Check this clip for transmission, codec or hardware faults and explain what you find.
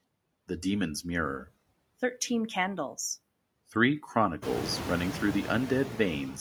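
One fault runs through the whole speech clip: noise suppressor artifacts. The suppressor pulls down, frame by frame, every band it judges to be steady noise, cutting it by about 21 dB, so the noise floor dips between phrases and swells back under speech. On a spectrogram the background shows as a patchy, flickering mesh of isolated time-frequency blobs rather than an even wash, and the waveform's quiet gaps look unnaturally empty. The room's own background noise climbs by about 17 dB around four and a half seconds, ending about 9 dB below the speech, which makes the suppressor's gating more exposed from that point.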